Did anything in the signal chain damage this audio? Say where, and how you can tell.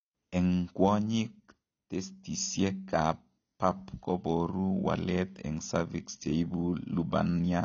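Yes, at the codec stage, and it runs the whole way through the speech. Nothing sits above about 6.9 kHz, so it sounds dull, and sibilants and held vowels have that watery, fizzy smear. That's likely AAC compression, with AAC-LC starved of bits, which fits something around 24 kbps. At that rate the encoder pulls its cut-off down and quantises the remaining bands so coarsely that gaps and swirl become plainly audible.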